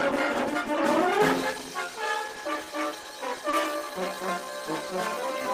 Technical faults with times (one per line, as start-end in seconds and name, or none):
1.80-5.53 time-stretched section
3.03-3.06 short stall from a late packet
3.50-3.54 short stall from a late packet